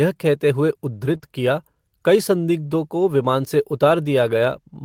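At 1.13 s, just after "कहते हुए", one lost packet was rebuilt from error correction: a 20 ms low-bitrate copy plays in place of the original, sounding briefly rougher and noisier. From 1.17 to 1.21 s, a short concealed packet loss fills a 20 ms gap by extrapolating the preceding speech, producing a brief smear. At 1.21 s, another packet is rebuilt from error correction, giving 20 ms of roughened audio just before "किया कई संदिग्धों को".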